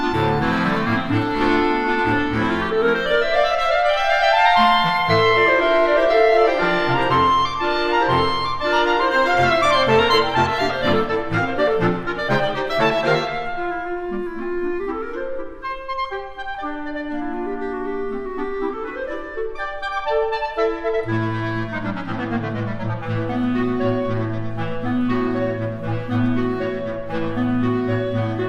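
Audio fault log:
No faults can be heard anywhere in this audio. Nothing in it calls for an entry in this log.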